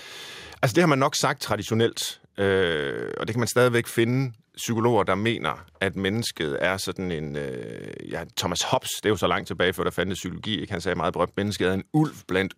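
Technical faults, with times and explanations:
No technical faults are present, so there are no times or explanations to give.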